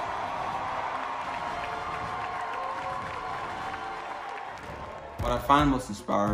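Processor overload crackle runs from 4.53 to 5.48 s. Missed deadlines leave dozens of silent gaps, fitting 1.5 ms buffers. It sounds like gritty tearing.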